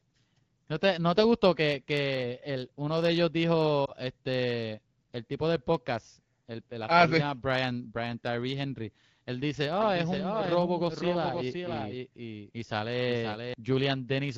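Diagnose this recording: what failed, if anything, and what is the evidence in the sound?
Lost AMR speech frames, network stage: one 20 ms frame fails at 3.85 to 3.92 s, between "el uno de ellos" and "este el tipo del". The decoder conceals it with a brief dip or warble, not a hard silent gap.

Doubled audio track: from 9.80 to 13.54 s a second full-band copy runs about half a second behind and about 5 dB quieter, likely from a slower second capture path or misaligned edit. Unlike room echo, it has no decay or reverberant colour.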